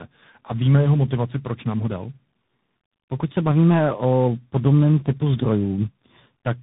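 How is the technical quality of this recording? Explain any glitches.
The technical quality is poor throughout, because of one fault that affects the entire recording: tandem speech coding.

From start to finish, the speech passed through three separate speech codecs in sequence, with plain telephone-grade links between them. The sound suggests a low-rate AMR-style coder, then ADPCM, and finally CVSD. Each stage re-encoded the previous stage's already damaged output, so the errors compounded. Nothing is present above 3.8 kHz. The result is speech that sounds rough, muffled, and warbly, worse than any one of those codecs would produce alone.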